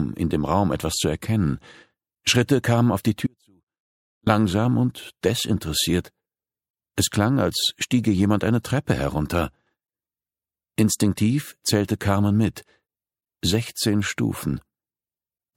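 At 3.27 s the sound drops out abruptly for about a second, to 4.27 s. It's an audio dropout to a faint residue: only a ghost of the signal, roughly 40 dB down, leaks through, likely because the feed broke while the path downstream stayed live.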